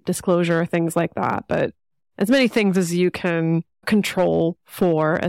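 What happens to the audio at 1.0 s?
At 1.0 s the speech is hard clipped, as it is across the whole clip. The signal is driven about 6 dB past what the stage can pass, so its peaks are sliced flat. Around one percent of samples hit that ceiling. The flattened tops add harsh high harmonics, heard as crackle on loud peaks.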